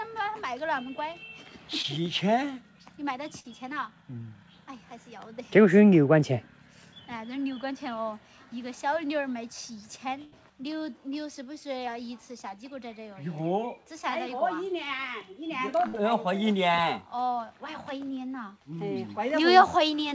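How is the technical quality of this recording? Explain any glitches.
The audio has brief dropouts typical of a call over a lossy network. It carries nothing above 8 kHz, consistent with a wideband codec like G.722.

At 1.82 to 1.86 s, a short concealed packet loss causes a quick smear or wobble. About 20 ms failed to arrive, and the receiver filled the gap by extending the preceding sound.

At 3.40 to 3.49 s, 10.24 to 10.34 s and 15.88 to 15.95 s, each burst of packet loss turns into a held buzz or fading hiss. The receiver stretched the last sound across the gap, and roughly 40 to 80 ms of audio is missing each time.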